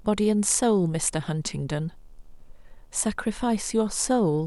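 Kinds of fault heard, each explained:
Video or display buzz: interference from a screen or video cable leaking into the audio path, heard throughout this speech clip as a low buzz at the 75 Hz picture field rate with hash above it, sitting faintly, roughly 40 dB beneath the speech.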